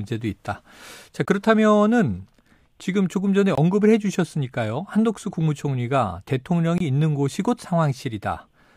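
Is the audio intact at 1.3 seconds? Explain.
No. A block of digital silence runs from 1.25 to 1.28 s, just before that point. The sound drops out for about 23 ms and returns with no fade, which fits a 1024-sample buffer left unfilled or filled with invalid values and replaced by zeros.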